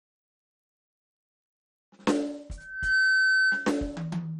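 MP2 compression damage runs through the whole music clip: it sounds dull, with nothing above 13.2 kHz and a gurgling, granular texture as upper sub-bands drop out and the rest are coarsely quantised, likely from heavy MPEG Layer II coding at a low rate around 56 kbps. A loudspeaker feedback squeal appears from 2.57 to 3.91 s, a single 1.5 kHz tone that swells in under half a second to roughly 10 dB above the music, as the microphone re-captures its own loudspeaker and the loop gain at that frequency exceeds one.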